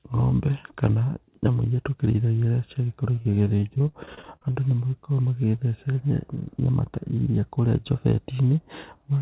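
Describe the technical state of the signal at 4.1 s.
Repeated packet loss runs from 3.16 to 4.56 s: about twenty gaps, each up to 43 ms and patched by stretching the preceding speech, leave the speech choppy and robotic, with a telephone-band ceiling at 4 kHz.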